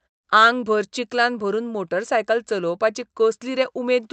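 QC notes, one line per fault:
Nothing to flag on this speech clip; the pauses drop to silence and the call path sounds the way it normally would.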